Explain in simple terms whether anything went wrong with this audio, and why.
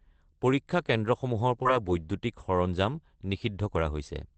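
Around 1.63 to 1.72 seconds the speech briefly smears and wobbles, as if a tiny piece were stretched over a gap. This is short concealed packet loss. About 20 milliseconds of the call arrived too late to play, so the receiving end filled the hole by carrying on the sound that came just before, then blended back into the real speech. The patch is slightly shorter than what went missing.

Two other tiny moments, from 1.65 to 1.67 seconds and from 1.88 to 1.90 seconds, sound rougher and grainier, with no gap. These are lost packets rebuilt from error correction. Each of these 20-millisecond pieces was lost, but the next piece of the call carried a rough backup copy of it, and the receiver played that copy instead of silence. The backup is lower quality, which causes the brief coarse texture. The call's Opus coding limits the sound to the lower range of frequencies, so these rebuilt moments don't lose any top-end brightness.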